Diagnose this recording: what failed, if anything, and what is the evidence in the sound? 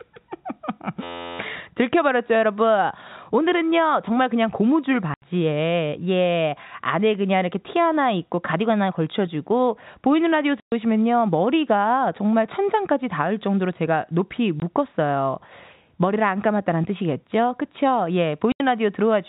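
A system hang loop at the driver or buffer stage runs from 1.03 to 1.39 s. An 11.61 ms fragment repeats 31 times, producing a steady buzz at 86.1 Hz. The driver stalled while the hardware kept replaying its ring buffer, which fits a 512-sample buffer.

Packet loss filled with silence, at the network stage, cuts hard-edged gaps into the telephone-band G.711 speech at 5.14 to 5.22 s (80 ms), 10.6 to 10.72 s (120 ms), 14.6 s (20 ms) and 18.52 to 18.6 s (80 ms). Every gap is a multiple of 20 ms, pointing to 20 ms packets replaced with silence.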